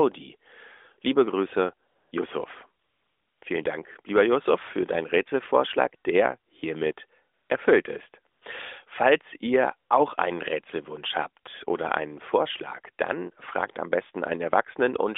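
A speech clip over AMR-NB narrowband mobile, band-limited to about 300 Hz to 3.6 kHz with light codec colouring. AMR comfort noise replaces the real background at 1.88–2.12 s, 2.84–3.42 s, 7.34–7.50 s (between "der hiermit" and "erfüllt ist") and 8.34–8.42 s (after "der hiermit erfüllt ist"). There the phone stopped sending speech frames and the receiver synthesised smooth, steady noise. On a spectrogram these gaps show as flat, featureless bands with abrupt edges. In the waveform they appear as an even low-level floor.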